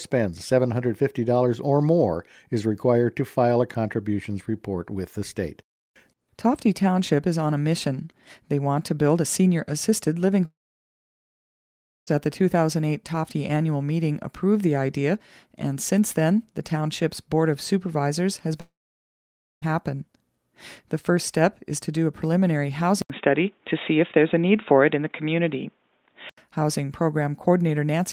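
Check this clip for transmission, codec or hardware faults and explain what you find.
Yes, there are three problems: two gaps where the audio simply goes missing, and one stretch where the sound quality drops.

Long network dropouts, at 10.45 to 12.10 s and 18.61 to 19.65 s. Roughly 1.6 s and 1.0 s of audio never arrive. The receiver briefly stretches the last sound into a fading buzz, then gives up. You get about 1.5 s and 0.9 s of dead silence before the audio resumes further on, with the missing chunk gone. That pattern most likely points to lost packets on the network.

Input switched to a poorer device, from 23.02 to 26.38 s. There's an 80 ms silence at the switch. After that the sound goes dull, with nothing above 3.8 kHz, and the level shifts by a few dB. A faint new background noise also appears, sitting well below the signal. The narrow band and changed tone suggest the system likely hopped to a different mic or a headset call profile, then back again.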